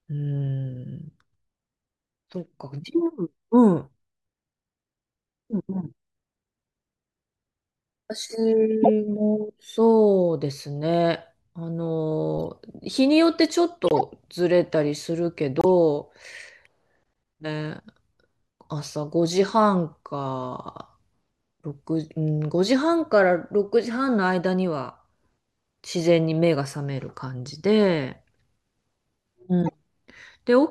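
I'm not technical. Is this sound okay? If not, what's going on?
No, there are a few glitches in this speech recording. The first is corrupt frame decoded: small pieces of the compressed audio got damaged, but the player played them anyway, so you hear brief chirps or bursts of noise, a loud one at 8.83 to 8.88 s, a faint one at 12.36 to 12.40 s, and a fairly loud one at 29.62 to 29.74 s.

The second is corrupt frame muted: here the player spotted the damaged pieces and dropped them, so the sound suddenly cuts to silence for a moment, from 13.86 to 14.01 s and again from 15.60 to 15.65 s. The recording stays in sync afterwards.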